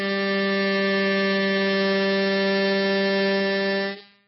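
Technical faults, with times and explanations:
Throughout, MP3 compression: treble stops dead at 5.6 kHz, and weak components flicker, sounding watery and smeared, likely from a very low bitrate; spectrograms show a flat ceiling and speckled gaps.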